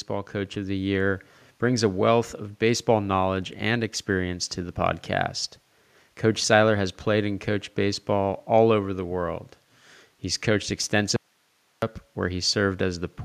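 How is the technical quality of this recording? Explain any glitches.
Two glitches stand out, one at the very start and one near the end.

From 0.08 to 1.22 s there's automatic gain rising. The AGC judged the opening too quiet and pushed its gain up by about 4 dB over just over a second, so the speech and the room noise underneath it swell together rather than the talker getting louder. It settles just before "brings a wealth of".

Then from 11.16 to 11.82 s there's an audio dropout to a faint residue. The speech cuts off abruptly, leaves roughly two-thirds of a second of plain hiss sitting about 45 dB below the normal level, and snaps back just as suddenly. That's not a pause or a fade. The wanted signal was likely lost upstream while the rest of the chain stayed live, so all that came through was its own noise floor.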